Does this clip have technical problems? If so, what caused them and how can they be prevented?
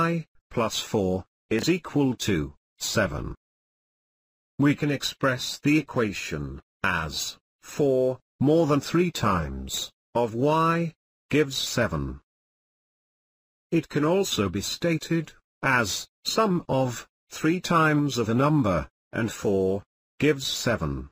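Yes. A brief garbled blip at 1.59 to 1.63 s is chunks out of order: one 10 ms chunk landed three chunks late and played after the audio meant to follow it. Reordering buffered chunks by sequence number before playback prevents this.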